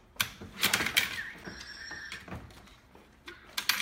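At 1.44 s a tiny tick and a near-instant dropout of a few milliseconds interrupt the sound, which then carries on from a different point. This is a CD skip: the laser lost its track and jumped to another turn of the disc's spiral.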